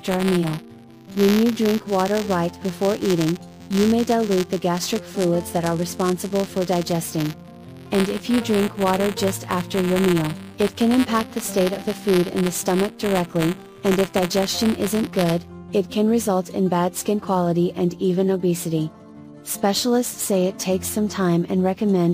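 A steady robotic buzz at about 172 Hz rides on the sound from the start until 15.49 s, rattling only while signal is present. This is buffer tearing: the writing program and the hardware reading the ring buffer have drifted so they cross inside each period, which fits a 256-sample buffer. A small sliver of every buffer replays audio from roughly 20 ms earlier, and the hard joins on either side produce the buzz.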